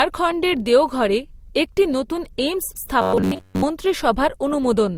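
Throughout the speech, transcoding between lossy codecs is likely: mixed smearing and swirly artefacts point to MP3 followed by Opus, unlike single-codec damage with one consistent texture.

From 3.02 to 3.62 s, just after "দেওঘরে একটি নতুন এইমস্", robotic sound from repeated short buffers turns the whole stretch into a rigid 94 Hz buzz, which fits roughly 11 ms buffers being repeated. Unlike a dropout, the sound continues rather than going silent.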